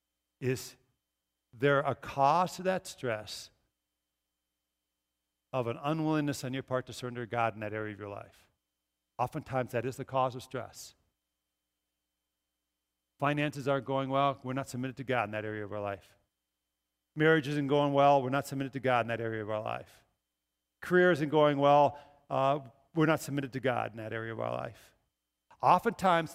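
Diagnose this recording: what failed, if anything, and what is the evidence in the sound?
Nothing failed in this recording: the speech signal stays continuous and intact throughout, with no event at any stage between capture and playback that points to a fault.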